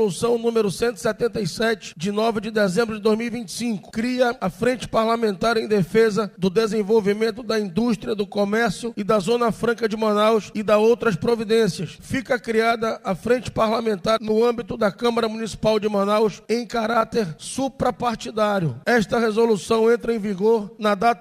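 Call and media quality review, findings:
Nothing here to flag: I listened all the way through and heard no faults in the audio path.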